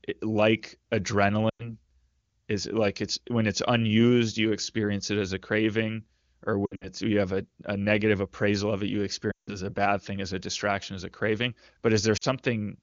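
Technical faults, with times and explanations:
1.49–1.75 s, 6.65–6.89 s, 9.31–9.59 s, 12.17–12.24 s: lost AMR speech frames. The decoder repeats the last good pitch and vocal tract settings at falling gain, so speech smears and fades. At 6.65 s the gaps are scattered and give brief dips or warble. Spectrogram: frozen, dimming harmonics. Waveform: shrinking envelope.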